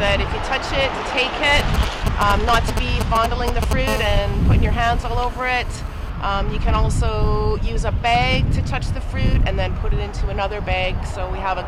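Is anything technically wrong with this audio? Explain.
Yes. GSM signalling bursts appear from 1.60 to 3.73 s. A 2G phone close by is sending short groups of radio bursts at a 217 Hz burst rate, as it does while signalling before a call or message. The audio circuitry rectifies those pulses, so they come through as a galloping dit-dit-dit of brief 217 Hz buzzes. They are loud, roughly 5 dB below the wanted sound.

GSM phone buzz follows from 3.88 to 6.10 s. Now the phone is in a call and transmits at 217 bursts per second. Each radio pulse is rectified into the audio path, which gives a hard, raspy 217 Hz buzz rich in harmonics that bears no relation to the program material. It is nearly steady, at about 15 dB below the signal.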